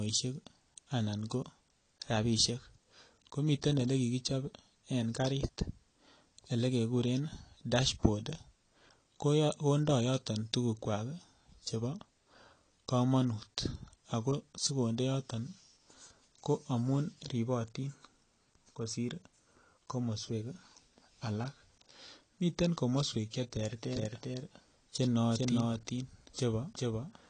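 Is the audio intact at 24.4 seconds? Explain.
No. From 23.85 s to the end, a doubled audio track is heard: a full-band copy of the speech trails the original by around 400 ms at about 5 dB lower, starting abruptly with no decay or room colour. This is likely from a second capture through a slower path or an edit holding two out-of-step copies.

At that moment, as throughout, there is plainly audible AAC compression. Nothing is present above 9 kHz, and the sound is dull and smeared, likely from AAC-LC at a low bitrate around 32 kbps, quantising frequency lines coarsely against a hearing model.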